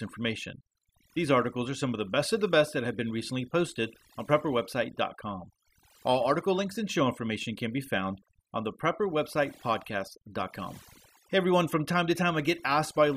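From start to finish, the clip carries overdone noise removal: a noise reduction stage was pushed too hard on a noisy recording. It drives individual frequency bands far down or off wherever they sit close to its noise estimate, and the quieter parts of the speech fall below that line and vanish with the noise. The background drops and breaks up into twinkling specks.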